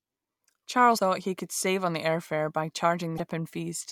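Around 0.95–0.99 s, just before "he could save on", and again at 3.16–3.20 s after "the air fare by", damaged data in the compressed stream makes the decoder lose sync, leaving a short glitch or hole in the audio.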